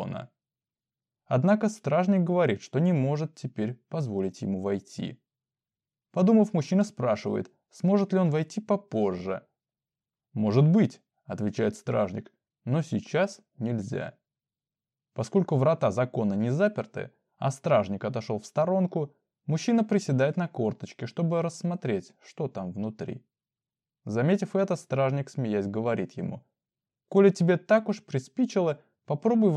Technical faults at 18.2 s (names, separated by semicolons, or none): none